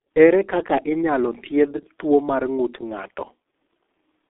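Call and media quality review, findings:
Speech muffled and hoarse throughout, consonants smeared, nothing above 3.6 kHz or below 300 Hz. Probable component: G.723.1 codec, heavy damage. Low-rate coder on 30 ms frames, slow voice-model updates; sound fits roughly 6.3 kbit/s.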